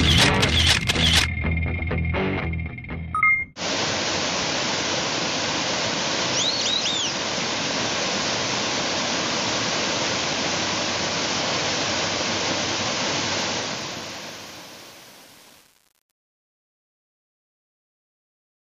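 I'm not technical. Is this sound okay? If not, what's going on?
No. Truncation distortion on the fade runs from 13.39 s to the end at 18.63 s. As the sound fades out, the quiet end turns gritty. The volume was stored too coarsely, in steps consistent with about 7 bits, with no added noise to smooth them.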